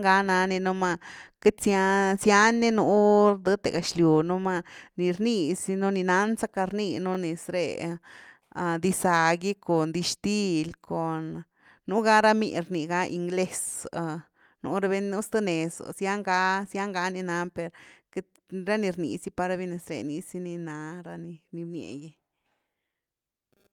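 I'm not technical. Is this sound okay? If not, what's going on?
No. At about 7.15 to 7.17 seconds there is a tiny stutter, a quick hiccup where a sliver of the speech plays twice in a row with an abrupt join, almost like a small click. This is a repeated buffer. The playback device works through sound in small chunks, and here the next chunk arrived late, so it replayed the previous one, about 21 ms long, which fits a 1024-sample chunk. Little or no speech seems to be lost.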